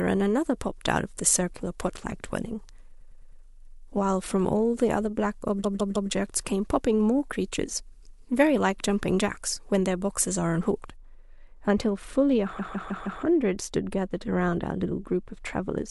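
From the start to 10.96 s the speech sounds thin, bright and hissy, with sharp sibilants. This is pre-emphasis left on: a 75 µs FM treble boost was applied but never undone, leaving 10 kHz about 14 dB too strong relative to 1 kHz.

At 2.99 s a short stretch stutters, replaying until 3.41 s. These are repeated frames: a block of about 105 ms, which fits four compressed frames, was decoded four extra times, adding 418 ms. The same stutter returns at 5.63 s, a block of about 157 ms played three extra times through 6.10 s (adding 470 ms). It happens again at 12.58 s, with the same block length played four extra times through 13.21 s (adding 627 ms). That length fits six frames.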